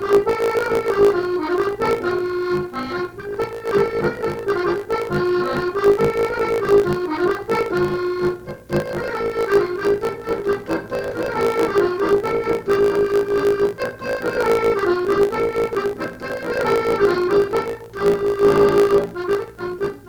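Block size mismatch (truncated) runs from start to finish. One stage hands over longer blocks than the next stage takes in, and the tail of each block is discarded. Each cut leaves a small discontinuity, so a steady buzz at about 54.4 Hz, the block rate, sits under the sound. Because part of every block is lost, the audio moves about 1.16 times faster than it should while keeping roughly its normal pitch. The pattern fits 1024-sample blocks being written and then cut short.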